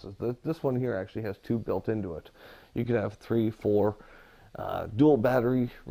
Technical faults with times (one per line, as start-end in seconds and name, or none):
none